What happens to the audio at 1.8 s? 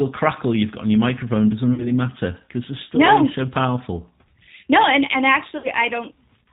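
Between about 1.74 and 1.93 s, right after "on your microphone doesn't", there is VoIP packet loss concealed by the speech codec. About 40 ms of audio went missing, which fits two lost 20 ms packets. The decoder filled it by stretching its last pitch and filter into a buzzy tone or coloured noise that fades. Unlike a plain dropout, there is no silent gap, and the speech stays weak and smeared for tens of milliseconds or more after packets return, into "matter because the story".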